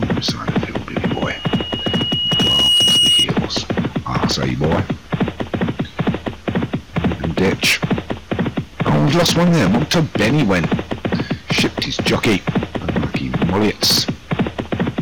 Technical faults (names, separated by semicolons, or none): hard clipping; loudspeaker feedback squeal